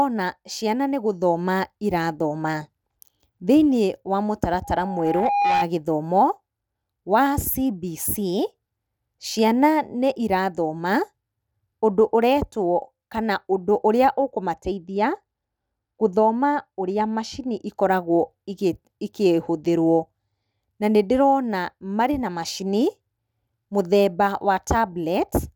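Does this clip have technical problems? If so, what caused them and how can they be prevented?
Yes. Loudspeaker feedback squeal, 4.64 to 5.68 s: the microphone re-amplifies the loudspeaker, so an 814 Hz tone builds over about a second until it is louder than the speech. Keep microphones behind loudspeakers and lower the gain or notch that frequency.

De-emphasis applied wrongly, 14.54 to 17.67 s: an unneeded treble cut slopes the response down by about 10 dB at 10 kHz relative to 1 kHz, muffling the speech. Apply de-emphasis only to pre-emphasised sources, and only once.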